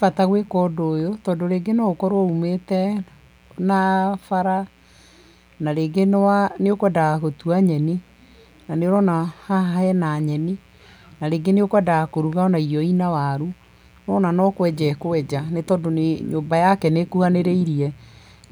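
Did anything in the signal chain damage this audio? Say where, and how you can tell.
Yes. A mains buzz runs under the speech for the whole clip, introduced in the analogue wiring before conversion. It is a steady, raspy tone built on 60 Hz, sitting roughly 35 dB below the speech. Unlike plain hum, which is a smooth low tone near the fundamental, this has a rasp from harmonics reaching into several kHz. That rasp comes from sharp switching spikes, twice per mains cycle, from a dimmer, rectifier or unshielded run.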